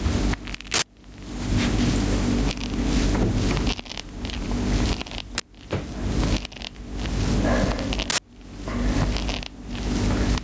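Gain pumping runs throughout the clip, with a level swing of about 30 dB. The likely cause is input gain set far too high, with a fast limiter or compressor clamping down whenever a loud event arrives and releasing in the pauses. Loud and soft sounds end up squashed close together, and the call microphone processing keeps everything below 8 kHz.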